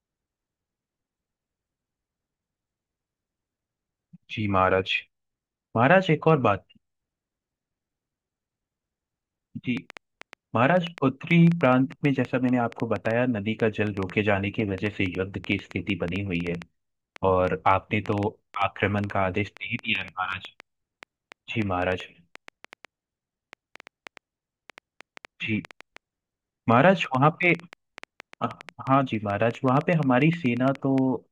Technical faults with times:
9.77-30.99 train of clicks

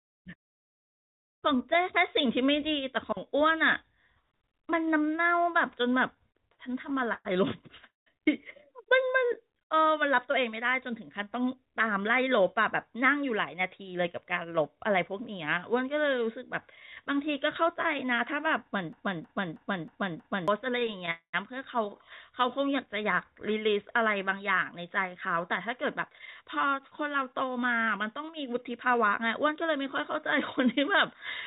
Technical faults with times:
6.14-7.27 repeated stalls (stutter)
7.87-8.08 call audio freeze
9.05-9.93 jitter buffer slow-down
11.91-15.40 jitter buffer speed-up
18.93-20.48 broken-record loop
20.71-21.09 repeated stalls (stutter)
21.11-21.35 call audio freeze
24.78-29.63 jitter buffer speed-up

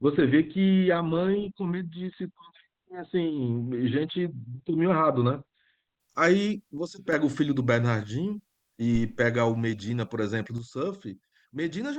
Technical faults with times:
0.00-6.00 adaptive stream starting at a low bitrate
6.78-7.13 sudden gain jump
8.95-9.24 phantom power thump
10.58-11.98 sudden gain jump

